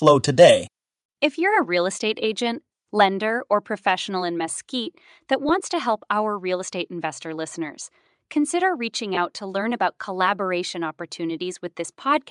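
Throughout the speech there is a breathy, grainy haze on the upper frequencies. That texture is the mark of Bluetooth LC3 compression, likely running at a rate around 48 kbps with 10 ms frames. The codec strips detail from the top of the spectrum and fills the gap with shaped noise. It is steady and present everywhere, unlike the brief, isolated faults that follow.

From 0.07 to 0.11 s and again from 0.40 to 0.51 s, the loudest peaks take on a harsh, crackling edge. This is microphone overload, likely from input gain set about 3 dB too high, so the converter flattened the peak tops. Only a small share of samples is affected in each burst. The hard, buzzy crunch distinguishes it from the smooth graininess of the codec.

At 1.02 s the voice and background both drop abruptly by about 5 dB. The likely cause is the microphone volume stepped down by software reacting to those clipped peaks. It is a clean, single step with no distortion of its own. 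That separates it from a fade or a gate, which would shape the level over time.

At 5.49 s, and from 9.15 to 9.18 s, the sound briefly smears into a noisy, pitchless blur. These are lost LE Audio frames. The first is consistent with one missing 10 ms frame and the second with about 20 ms of loss. The decoder patched each gap by repeating the last spectrum with scrambled phase. The result sounds like a noisy smear rather than the click or hard dropout of a plain gap.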